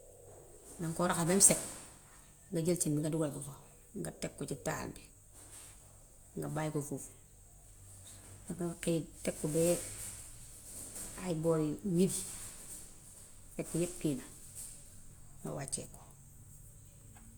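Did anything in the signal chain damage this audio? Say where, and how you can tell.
No, nothing along the signal chain has left any audible damage on this speech recording.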